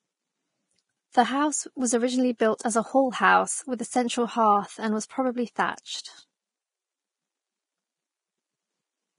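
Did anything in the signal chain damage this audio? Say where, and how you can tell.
Yes. The codec stage likely did it: Vorbis compression, heavy throughout, with nothing above 10.6 kHz and a grainy hiss in the treble where fine detail was coarsely quantised, which fits a bitrate near 28 kbps. A plain low-pass would leave the treble below the cut-off clean rather than grainy.

Pre-echo, also from the codec, appears from 2.58 to 2.60 s: about 20 ms of hiss arrives before an attack and softens its onset. The block's quantisation noise spread backwards into the quiet moment. Reverb or echo would trail after the sound, not come before it.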